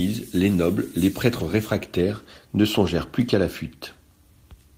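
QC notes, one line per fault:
1.39–1.41 s (after "les nobles les") and 2.85–2.87 s (after "réfractaires ne"), lost packet rebuilt from error correction: each 20 ms packet was replaced by the low-bitrate copy carried in the following packet. There is no gap, only a brief rough, noisy grain. On a spectrogram, each appears as a short smeared, hazier slice with a continuous waveform.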